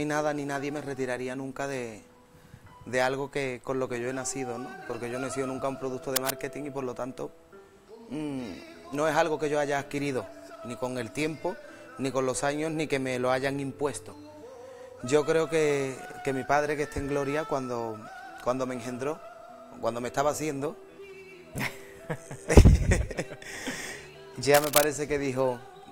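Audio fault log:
6.16 to 6.33 s and 24.54 to 24.84 s, cable scratch noise: Short bursts of dense, uneven scratching ride over the sound, each about as loud as the sound itself. A worn cable, connector or control was likely moved, making its contact resistance jump rapidly.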